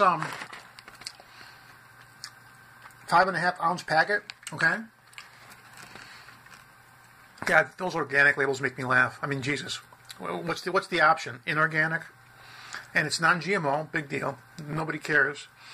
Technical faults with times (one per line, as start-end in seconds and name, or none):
none